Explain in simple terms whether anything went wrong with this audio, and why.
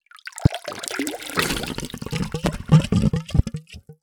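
Three loud pops occur, at about 0.46, 2.46 and 3.39 seconds, each a brief, sharp burst far louder than the surrounding sound, which carries on underneath. They were likely caused by sudden electrical jolts, such as a switch, plug or static discharge, entering the signal.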